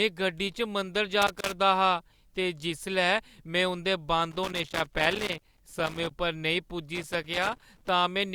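A speech recording with three bursts of loose connector crackle. They run from 1.22 to 1.53 s, 4.31 to 6.11 s, and 6.95 to 7.89 s. Each burst is an irregular scratching crackle laid over the speech. The cause is a worn or dirty contact in the signal path. As it shifts, it makes and breaks contact many times in quick succession. That chops the audio on and off. Any DC on the line turns each break into a pop.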